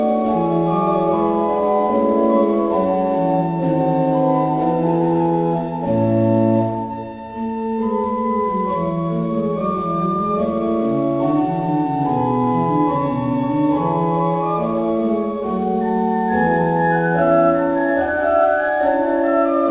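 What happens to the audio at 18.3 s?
At 18.3 s the audio is intact, with nothing beyond the telephone-like band of the call path, which carries nothing above 4 kHz.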